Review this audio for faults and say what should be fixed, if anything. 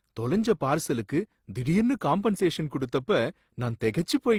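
The whole clip carries a stacked-codec sound that is most likely transcoding between lossy codecs. The speech has two different flavours of artefact sitting on top of each other, which fits an HE-AAC encode at around 32 kbit/s later re-encoded to Opus at a similar rate. The second encoder spent its bits on the first one's damage and added its own. The band still reaches about 20.2 kHz. To prevent this, encode once from the original uncompressed source rather than converting an already compressed file.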